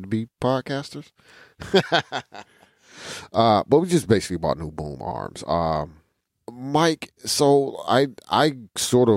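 No technical faults can be heard anywhere in the speech recording; there are no interruptions or disturbances.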